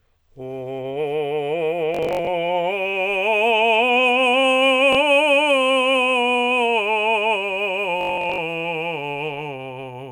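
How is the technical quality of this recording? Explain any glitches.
The music has Bluetooth stutter in three places. From 1.95 to 2.27 s, about 180 ms of audio drops out in bursts over roughly 330 ms, with the longest run near 60 ms. At 4.93 s a single gap of about 20 ms occurs. From 8.01 to 8.38 s, about 240 ms drops out over roughly 370 ms, with runs up to about 80 ms. When wireless packets arrive late or not at all, the receiver replays its last short slice of roughly 20 ms. Back-to-back repeats form a buzzy, machine-gun stutter, and the music then picks up further along, as if it had kept playing. The isolated 4.93 s event is a single brief repeated blip.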